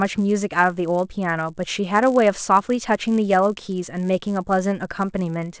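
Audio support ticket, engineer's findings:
Resampler restarted on every block, whole clip. Buzz at 100 Hz under speech, gone in pauses. 44.1 kHz to 16 kHz conversion run on 10 ms blocks without carried-over state, so each block edge gets a small error. Spectrogram: harmonic comb at 100 Hz multiples; waveform: periodic edge discontinuities.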